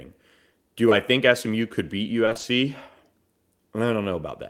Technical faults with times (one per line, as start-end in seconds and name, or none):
0.89-0.93 short concealed packet loss
2.25-2.45 repeated packet loss (robotic sound)